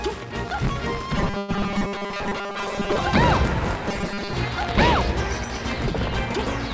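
From 1.17 to 2.99 s the sound turns into a rigid, metallic buzz at 200 Hz. That's robotic sound from repeated short buffers, likely caused by audio arriving too seldom so that roughly 5 ms snippets get replayed in place of most of the real signal. The 200 Hz pitch is simply one over that 5 ms length.

Inside that stretch, at 1.38 to 1.50 s, there's a call audio freeze. The last sound just carries on as a fading buzz for 105 ms, with no silence. That's likely a jitter buffer running dry while packets were held up. When audio resumes it picks up right where it stopped, so nothing is lost, but everything after that point sits 105 ms later.

The robotic buzz comes back at 3.89 to 4.33 s, again a fixed 200 Hz metallic tone from the same 5 ms repetition.

Throughout, the top end stops at 8 kHz, which fits a G.722 call path at 64 kbps.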